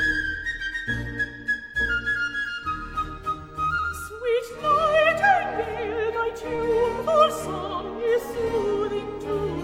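At 6.55 s there is a short stall from a late packet, lasting until about 6.62 s. A packet arrived late and the jitter buffer ran dry. The receiver held the last sound for 32 ms, then resumed where it stopped. Nothing is lost. The held sound has a slight buzz or dip, and everything after it plays 32 ms later.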